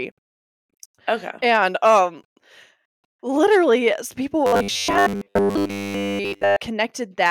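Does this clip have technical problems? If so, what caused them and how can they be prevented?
Yes. Robotic sound from repeated short buffers runs from 4.46 to 6.57 s, starting right after "literally yes people". Across most of that stretch the speech turns into a rigid, metallic buzz at 100 Hz that still roughly tracks the words. That buzz fits a chunk of about 10 ms being replayed over and over while the real audio is skipped, likely because new audio arrived too seldom. Larger jitter buffers and steadier network or processing scheduling would prevent it.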